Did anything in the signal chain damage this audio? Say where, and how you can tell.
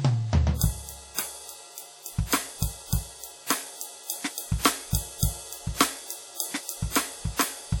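Yes, at the codec stage: the music was likely put through WMA compression, with damage that fits an early WMA encoder at around 48 kbps. Throughout, quantisation noise smears ringing and a washy, signal-following hiss across long transform blocks, and nothing survives above 19.8 kHz.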